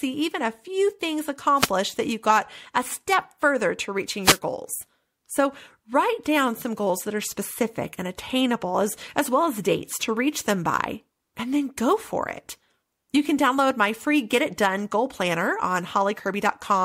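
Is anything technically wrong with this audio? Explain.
Yes. Wireless microphone noise hits occur at 1.55–1.71 s and 4.23–4.39 s, each a brief burst of static about 0.16 s long. The FM radio link faded as reflected paths cancelled, so receiver noise rose momentarily.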